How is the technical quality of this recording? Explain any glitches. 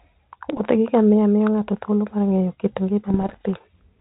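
The recording is band-limited telephone speech with ADPCM coding, and it's marred by two patches of bit errors on an ADPCM link, from 0.52 to 0.61 s and from 3.09 to 3.41 s. Flipped bits there (under one percent early, fewer later) knock the decoder's step size and predictor off track, so each error rings on briefly as pops and rough bursts with quick level jumps.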